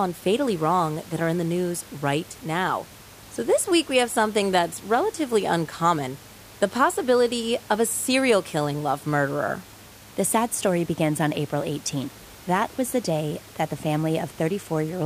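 No technical faults can be heard anywhere in this speech recording, and the only other sound is the room's own background noise, sitting about 22 dB below the speech.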